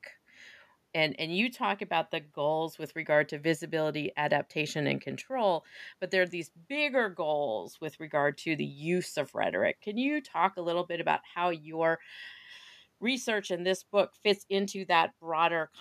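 No technical faults are audible.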